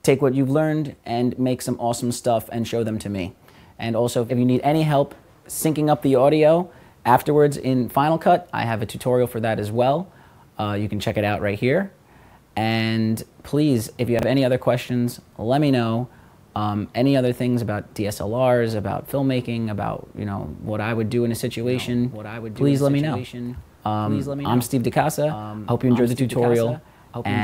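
At 14.19 s, chunks out of order: a 10 ms piece lands three chunks late, giving a brief jumbled stutter, but unlike a dropout nothing is missing. From 21.59 s to the end, a doubled audio track: a second full-band copy trails about a second and a half behind, roughly 10 dB quieter, starting abruptly, likely from a slower duplicate capture path. Unlike reverb, it has no decay or room colour.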